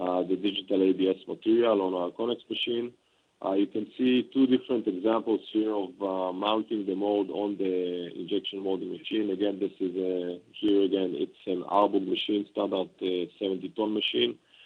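No technical faults can be heard in this audio.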